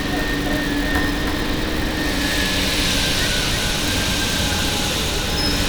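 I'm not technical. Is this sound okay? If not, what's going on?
No. There's a doubled audio track throughout: every sound repeats about a third of a second later, somewhat quieter, likely from a second out-of-step copy mixed in.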